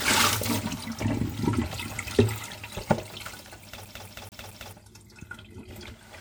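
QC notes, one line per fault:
Throughout: low-bitrate audio saved at a high bitrate. These everyday sounds carry the smeared, slightly watery texture and swirling transients of a heavily squeezed encode. Content does extend up to about 20.1 kHz, but that wide band does not hide the damage. The likely cause is a file first cut to something like 64 kbit/s WMA and then re-encoded as 320 kbit/s MP3. The second pass keeps the earlier losses intact and cannot rebuild what was thrown away.
3.85–4.73 s: CD stuck on one turn. A quick, mechanical stutter replaces the flow: the same 219 ms slice plays four times in a row, with a brief dropout at each jump back. The even spacing gives it away. A scratch makes the laser lose tracking at the same point on the disc every revolution and jump back one track, so that fixed stretch of audio is replayed until it breaks free.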